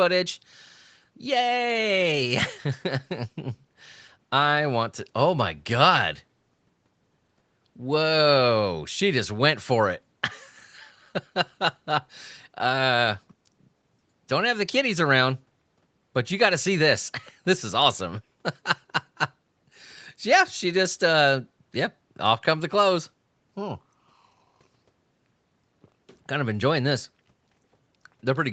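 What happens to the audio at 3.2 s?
Nothing goes wrong at 3.2 s: the speech carries on intact through that moment, with only the normal band limit of the call path, which leaves nothing above 8 kHz.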